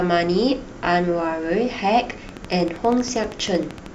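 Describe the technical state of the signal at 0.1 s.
At 0.1 s the speech signal is intact, with no audible fault at that point.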